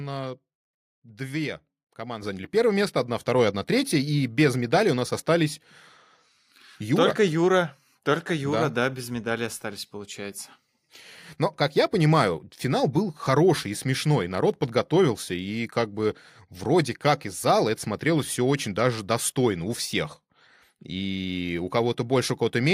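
Speech clip with the microphone volume stepped up at 2.22 s, between "две команды" and "заняли первое место одна". Voice and background jump about 7 dB together in one step, which rules out the speaker simply leaning closer.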